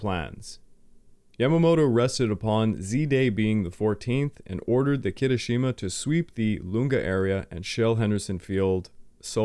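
No technical faults are audible.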